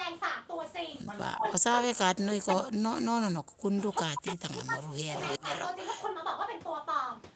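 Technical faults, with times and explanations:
1.35–5.14 s and 5.39–5.45 s, speech suppressed in double talk: the speech repeatedly dips and breaks up, falling by as much as about 40 dB, for around three seconds in all. The second dip is brief and shallower, about 15 dB. The likely cause is an echo canceller that heard both sides at once and turned everything down.
2.48–2.65 s, 4.28–4.33 s, 4.52–4.56 s, 4.73–4.78 s and 5.15–6.04 s, echo leak: a delayed copy of the speech returns about 0.36–0.37 s late. It sits about 10 to 25 dB below the speech. The early ones are short scraps and the last one runs nearly a second. This is likely loudspeaker echo that an echo canceller failed to remove.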